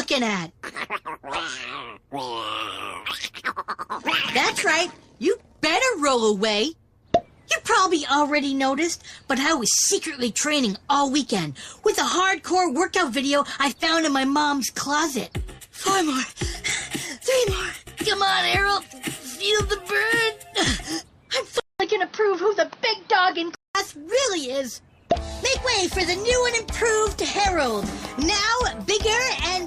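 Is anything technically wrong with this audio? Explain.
Yes, there are two separate problems close together.

At 20.85 s the sound jumps forward by roughly 20 ms. This is compressed frames skipped: the jump fits a single lost frame that was missing from the stream or rejected as damaged by the decoder.

From 21.60 to 23.75 s, the audio first drops out for about 200 ms. It then returns duller and boxier, with nothing above 6.2 kHz and a new background noise floor sitting roughly 30 dB below the signal, while the overall level stays about the same. At 23.75 s the sound clears again. The likely cause is the input switched to a poorer device, a narrower-band microphone or headset profile with its own tone and noise, before switching back.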